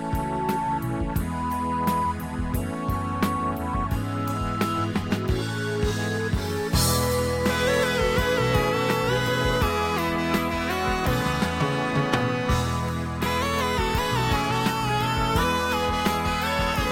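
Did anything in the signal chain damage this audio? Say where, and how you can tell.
No, no signal-chain damage heard.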